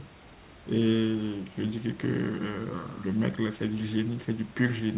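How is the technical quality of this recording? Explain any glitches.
Nothing stood out on listening: the speech comes across the G.711 call path with the band ending at 4 kHz, as that codec does, and the room noise sits about 25 dB below it.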